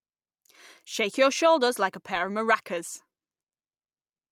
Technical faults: none

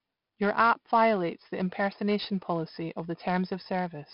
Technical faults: 4-bit ADPCM compression

